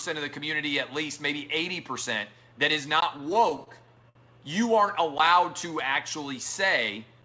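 From 3.18 to 4.17 s, repeated stalls (stutter) break up the sound. Packets arrived late and the jitter buffer kept running dry. Eleven short gaps, the longest 59 ms, were filled by continuing the last sound. Nothing is lost, but the passage drags and jerks. Throughout, nothing sounds above 8 kHz, which fits a wideband call codec such as G.722.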